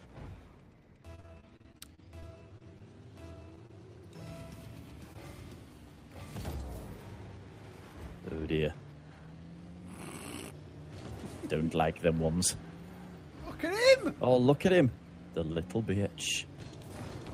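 From 1.15 to 2.82 s, the audio breaks up with repeated packet loss, giving a robotic sound. Pieces keep failing to arrive in time. Each hole is patched by stretching the last sound forward, and then the next hole arrives. There are about a dozen gaps, the longest near 42 ms. Roughly 180 ms of real audio is missing, and concealment covers close to 18 percent of the stretch. The result is choppy and unnatural.

Two short concealed packet losses follow. The first runs from 3.67 to 3.71 s. The second runs from 5.13 to 5.17 s. In each, about 20 ms of audio never reached the decoder. The receiver carried the preceding sound across the hole and then blended back into the real signal. Each sounds like a brief smear or wobble, a tiny blur in the flow.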